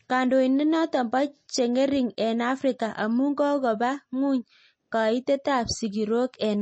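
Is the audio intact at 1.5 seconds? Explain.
No. At 1.5 seconds, as through the whole clip, the speech sounds watery and swirly, with a metallic chirp on s sounds, smeared consonant attacks and no content at all above about 8.3 kHz. This is likely MP3 compression at a low bitrate, which fits roughly 32 kbps. With so few bits, the encoder cuts the treble at a fixed frequency and zeroes weak frequency lines, which then flicker on and off from frame to frame.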